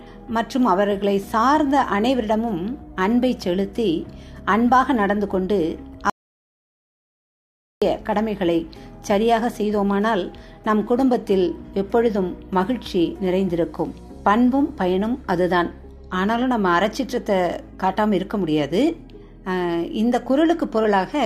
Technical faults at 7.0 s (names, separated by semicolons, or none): audio dropout to silence